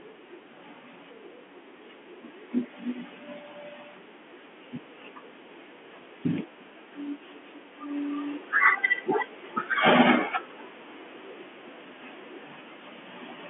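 No technical faults can be heard in this speech clip. It carries the narrow band of G.711 telephone coding, with nothing above 3.7 kHz.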